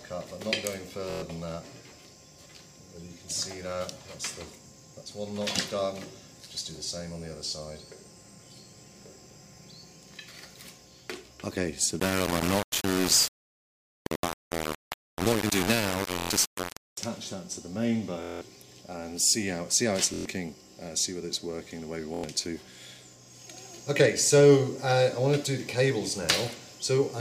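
At 1.10 s the sound catches in a rapid machine-gun buzz for about 0.12 s, then jumps ahead as if it had kept playing. This is Bluetooth stutter: packets arrived late or not at all, and the receiver kept replaying its last short buffer until fresh data came, a gap that fits about five lost packets.

From 12.00 to 16.98 s the audio turns coarse and grainy, with distortion that shifts along with the sound itself, and quiet passages sputter between a couple of levels or drop out. The error sits only a few decibels below the signal. The likely cause is low bit depth without dither: the signal was rounded to very few steps (the grit fits roughly 3 bits), so the error tracks the signal instead of forming steady hiss.

More Bluetooth stutter breaks through the same way at 12.75 s (a single brief repeat of about 23 ms), 16.19 s (about 0.12 s), 18.23 s (the longest burst, about 0.19 s), 20.14 s (about 0.12 s) and 22.14 s (about 0.09 s).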